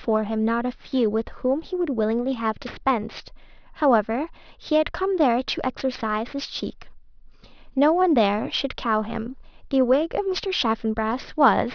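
Aliasing runs through the whole speech clip. Energy above about 5.5 kHz folds back as gritty, metallic hiss, roughly 20 dB down, which suggests downsampling to 11 kHz without filtering.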